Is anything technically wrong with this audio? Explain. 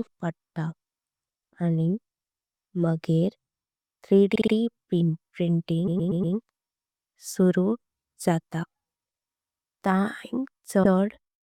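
Yes. Repeated frames stutter the speech at 4.35–4.53 s, 5.87–6.35 s and 10.83–10.93 s. A compressed block (60, 120 and 100 ms) is replayed three, four and one extra times, adding 180, 480 and 100 ms.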